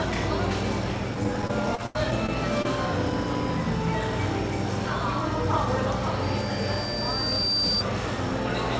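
Everyday sound carried over a call link whose band stops at 8 kHz, as a wideband codec like G.722 would. From 1.24 to 2.66 s, repeated packet loss (robotic sound) leaves a run of short holes, the longest about 83 ms, each patched by stretching the previous sound, so the stretch turns choppy rather than simply dropping to silence. From 6.21 to 7.85 s, a loudspeaker feedback squeal appears: a single 4.7 kHz tone swells over roughly a second and a half to about 5 dB above the sound, steady in pitch, unlike a whistle or interference tone that would not grow.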